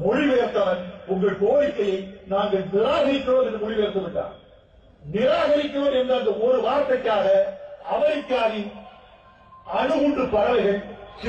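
No technical faults can be heard anywhere in the recording. Nothing in the audio points to a problem in how it was captured, processed or delivered.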